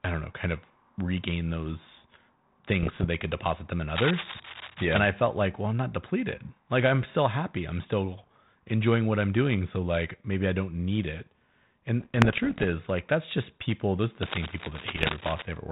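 From 2.83 to 3.07 s the speech, carried over a 32 kbit/s G.726 ADPCM link, breaks into pops and rough bursts. These are bit errors on the ADPCM link at around one percent. Each flipped bit knocks the decoder's step size and predictor off track, so the disturbance rings on briefly with brief jumps in level.

Between 3.95 and 5.06 s, after "could deposit them in" and before "felt like well I'm", a dense, uneven scratching sits only a few dB under the speech. This is cable scratch noise, likely from a worn connector or cable whose contact resistance fluctuates as it moves.

The same ADPCM bit errors return from 12.01 to 12.67 s, just before "like that's just people", as a longer run of crackle and rasp. From 14.22 to 15.42 s, following "just people those are", the scratching recurs, with a short burst of bit-error pops at 14.92 to 15.08 s on top of it.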